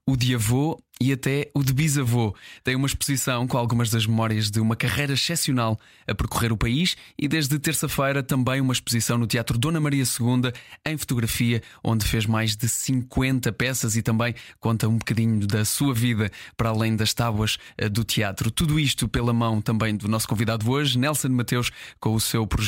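A speech recording with no technical fault to be heard anywhere in it. Nothing in the audio calls for a time or a cause to be pointed out.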